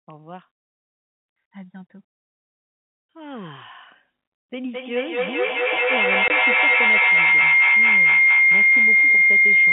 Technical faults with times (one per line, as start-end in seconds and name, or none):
4.71-9.72 feedback howl
6.28 packet loss filled with silence